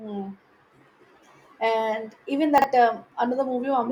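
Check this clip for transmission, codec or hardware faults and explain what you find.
One transmission fault is present, at 2.58 to 2.64 s: chunks out of order. A 20 ms chunk of speech arrives two chunks late and plays after the ones meant to follow it. Nothing is lost. The three hard joins give a brief jumbled stutter.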